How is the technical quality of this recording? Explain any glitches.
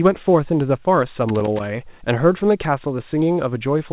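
The recording has one glitch, a loose connector crackle. The speech is also band-limited, with nothing above 4 kHz, which fits a narrowband telephone codec such as G.711 A-law at 64 kbps.

From 1.29 to 1.66 s, a burst of crackle lasts about 0.37 s. A worn or dirty contact is making and breaking as it shifts. Each break chops the signal. Any DC on the line turns every reconnection into a pop. The result is an uneven, scratchy rattle, not a steady noise.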